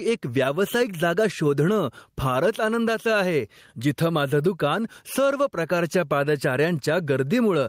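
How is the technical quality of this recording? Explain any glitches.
The recording has a clear technical problem: gain pumping runs through the whole speech clip. The gain swings by around 10 dB, pulling down as soon as speech gets loud, so loud and soft passages sit unnaturally close in level and the sound feels squashed. The likely cause is input gain set far too high, with a fast limiter or compressor clamping down on every loud syllable and releasing in the gaps. On a waveform the peaks look flattened to a near-constant ceiling.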